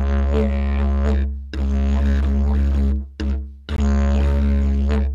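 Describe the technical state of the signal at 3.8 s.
At 3.76 s the sound drops into an abrupt, hard-edged hole of silence about 18 ms long. This is a gap between stream segments: the timestamps of adjoining segments don't meet, so the player pads the mismatch with silence, which fits a 2-second segment boundary. No audio is lost.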